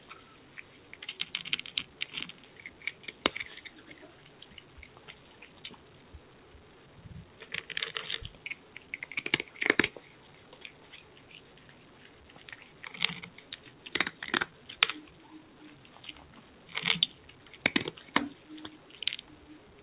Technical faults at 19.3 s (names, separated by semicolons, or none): noise suppressor applied to music or sounds